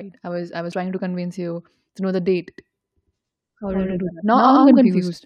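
Right after "I was I was" at 0.71 s, compressed frames get skipped: about two 23.2 ms frames go missing, so the speech jumps roughly 50 ms to "to convince you to".

From 2.58 s, just after "to know the date", a doubled audio track runs to the end: a second copy, about as loud, trails roughly a tenth of a second behind with no room tail, likely from a slower capture path.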